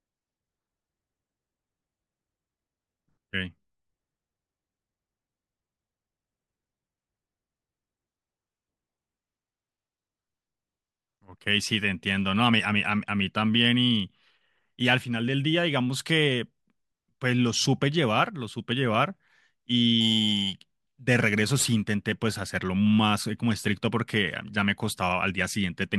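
From about 20.01 s to 21.94 s the speech picks up a crude rate conversion. It sounds like the rate was changed by just grabbing the nearest sample, with no filtering. That fits a jump from 44.1 kHz to 48 kHz. The repeating errors throw off inharmonic tones sitting only around 20 dB under the speech, so you hear a gritty fizz riding on the louder and brighter sounds for those two seconds.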